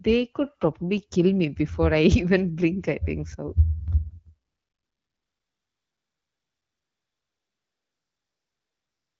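From 4.47 s to the end, AMR comfort noise takes over. The phone stopped sending speech frames for 4.7 s, so a smooth synthetic hiss replaces the real background.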